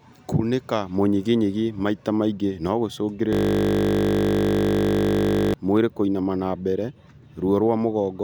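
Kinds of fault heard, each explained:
System hang loop: the system froze and the hardware kept replaying one 20 ms buffer, so the speech turns into a steady 50 Hz buzz from 3.33 to 5.54 s.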